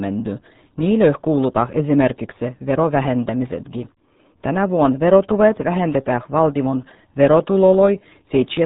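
From start to finish the speech carries the signature of the RealAudio 14.4 codec, the RealAudio 1 speech coder built for dial-up modems. Squeezing the signal into 8 kbit/s leaves nothing above about 3.9 kHz, so consonants lose their edge and the voice turns muffled. Coding damage is heavy: the codec's coarse model of the voice leaves a gargly, watery texture over every phrase, as if spoken through a tube.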